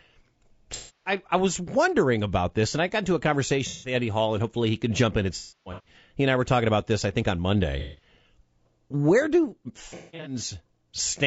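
Low-delay AAC compression runs through the whole speech recording, plainly audible as a rough, grainy texture with noise filling the gaps between harmonics and a thin, synthetic-sounding top band. The likely cause is AAC-ELD, whose short frames resolve pitch detail poorly, and the coarseness fits a bitrate around 32 kbps.

AAC frame loss with concealment breaks in five times, where the decoder patched missing frames from the last good spectrum. From 0.74 to 1.12 s, just before "I was wondering about", roughly 270 ms is smeared into a noisy, phasey patch. From 3.68 to 3.94 s a shorter gap of about 150 ms does the same. From 5.36 to 5.95 s, right after "can jump in at", losses scatter over about half a second, the longest run around a third of a second. From 7.79 to 8.08 s, after "this I think on", about 180 ms blurs. From 9.89 to 10.36 s, gaps spread over about 360 ms, the worst about a fifth of a second. 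The patch lengths point to frames of about 30 ms.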